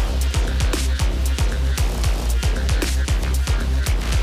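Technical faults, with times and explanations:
Nothing here calls for a note, as there are no technical faults to point to anywhere in the clip.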